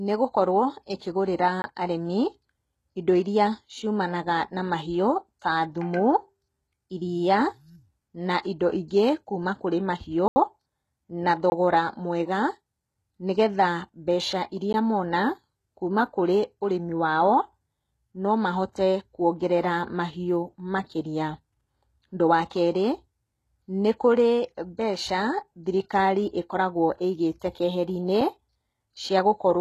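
The speech is dull and gritty throughout, with nothing above 12.3 kHz and a metallic treble. This likely comes from HE-AAC compression at a low bitrate, which fits about 16 kbps.

Blocks of digital silence follow. The first runs from 1.62 to 1.64 s, just after "nĩgũkorwo ĩkĩgũrĩra". Others fall at 10.28 to 10.36 s, the longest at 80 ms, at 11.50 to 11.52 s, and at 14.73 s. The sound cuts out and back with no fade.

Pre-echo smears attacks at 18.72 to 18.76 s and 27.39 to 27.42 s. Codec noise spreads ahead of the onset as a brief hiss.

A final tiny block of digital silence at 28.21 s is heard as a tick.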